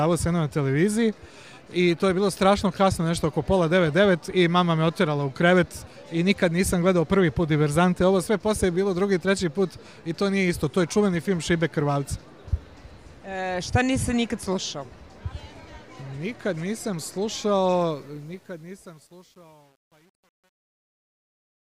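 Truncation distortion on a fade runs from 17.89 s to the end, where the audio fades out from around 18 s: from 18.46 s the tail turns gritty, which fits roughly 9-bit undithered resolution. The waveform shows blocky square steps, and the spectrogram shows broadband hash speckles.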